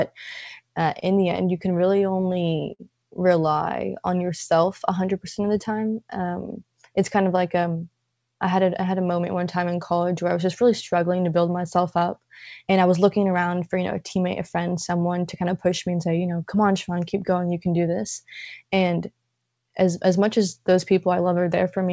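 Repeated stalls (stutter) run from 1.00 to 2.81 s, just before "rely on yourself": late packets drained the jitter buffer nine times, stretching the sound up to 55 ms each time, so it drags and hiccups.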